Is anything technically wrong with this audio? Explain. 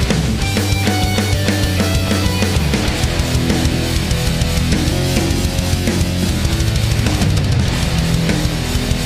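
Yes. From 4.92 to 6.29 s there is a wrong sample rate: the sound runs 1.09 times fast and 1.47 semitones high, which fits 44.1 kHz audio played at 48 kHz unconverted. Pitch and tempo rise together, unlike a pitch shift or time-stretch.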